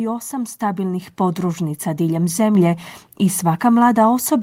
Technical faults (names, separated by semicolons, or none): microphone volume stepped up